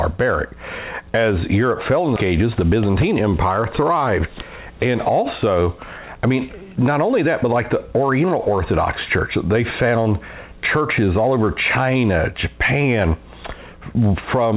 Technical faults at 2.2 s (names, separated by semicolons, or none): skip ahead; jitter buffer speed-up